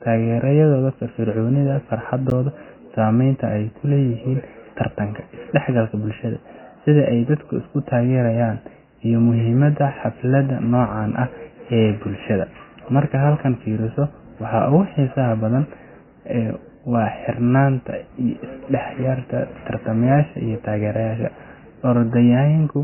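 From start to finish the speech carries heavy MP3 compression damage: nothing survives above 3 kHz, so it sounds dull and boxy, with a watery, swirling texture and smeared consonant attacks. The likely cause is an encoder starved of bits, consistent with a very low bitrate around 16 kbps, cutting the treble outright and dropping weak frequency lines frame by frame. A spectrogram shows a hard ceiling at 3 kHz and patchy, flickering islands of energy below it.

At 2.30 s there is a block of digital silence about 11.6 ms long. The run of zeros likely comes from a 512-sample buffer not being filled in time. The signal drops out and returns with no fade, and at this length it is heard as a short tick rather than as silence. The waveform shows a near-flat line with sharp steps on either side, and the spectrogram shows a thin vertical blank.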